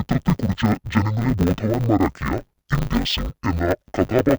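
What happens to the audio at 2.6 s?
Interleaved audio read as planar affects 2.6 s and the whole clip: each 10 ms block's halves play as separate channels, making the speech dull and robotic with a 100 Hz buzz.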